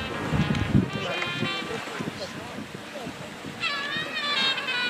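Nothing in this one stands out as a technical fault; the sound just runs along without any glitch, dropout or disturbance to point to.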